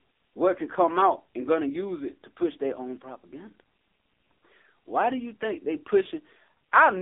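From start to finish the speech has gone through an AMR narrowband mobile codec, the old 2G/3G phone-call coder, and it's been hit hard. The band is squeezed to roughly 300 Hz to 3.6 kHz, with nothing at all above that, so it sounds boxed-in and dull. The codec rebuilds each 20 ms frame from a vocal-tract model and a handful of pulses, and the heavy buzzy, synthetic edge suggests a low mode around 6.7 kbps.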